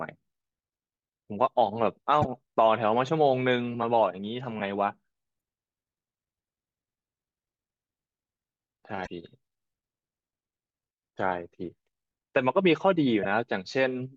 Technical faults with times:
2.22-2.25 damaged data in a compressed stream
5.37-5.40 damaged data in a compressed stream
9.03-9.07 damaged data in a compressed stream
13.23-13.25 damaged data in a compressed stream

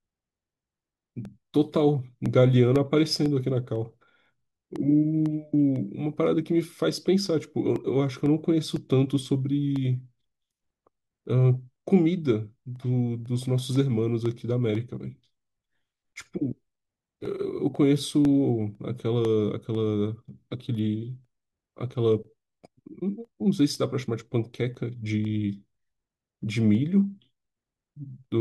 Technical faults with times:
0.25-28.25 periodic USB or driver dropouts

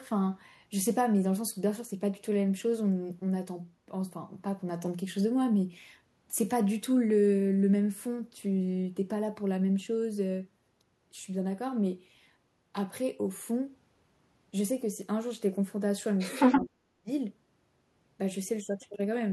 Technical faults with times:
16.18-16.61 other side's voice leaking through
16.56-17.10 speech suppressed in double talk

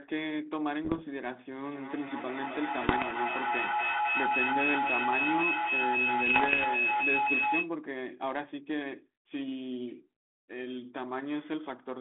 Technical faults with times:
0.85-1.04 bit errors on an ADPCM link
1.65-7.76 feedback howl
2.82-3.13 bit errors on an ADPCM link
6.26-6.66 bit errors on an ADPCM link

